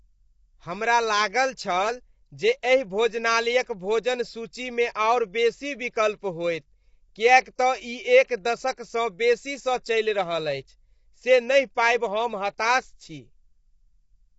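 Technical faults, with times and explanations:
Throughout, low-delay AAC compression: the speech sounds rough and grainy for the whole clip, with a noisy fill between the pitch harmonics and nothing above 7.8 kHz. The likely cause is AAC-ELD, the low-delay coder of video calls. Its short frames resolve voice harmonics coarsely, so at a tight bit budget the gaps between them are filled with noise. The plainly audible damage fits a bitrate around 24 kbps.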